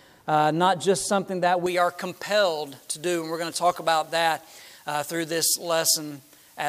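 From 1.66 s to the end, pre-emphasis is left on: an unreversed treble boost of about 11 dB at 10 kHz thins the sound and brightens the spectrogram's upper bands.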